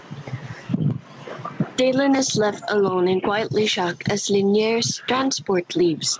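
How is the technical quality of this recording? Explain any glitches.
The recording is marred by gain pumping that runs through the whole clip. The input gain was likely set far too high for the microphone, so a fast limiter or compressor keeps clamping down on every loud syllable of the speech and then releasing, a gain swing of around 20 dB. Loud and quiet passages end up squeezed toward the same level, leaving the speech sounding flattened. The call path itself can be heard in the band limit, with nothing above 8 kHz, which fits a wideband call codec such as G.722.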